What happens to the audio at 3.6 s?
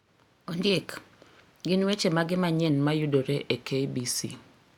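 The speech slows by about 5.6% and drops nearly a semitone from 2.70 to 4.57 s, likely a drift correction step retiming playback to rebalance a clock-sync buffer.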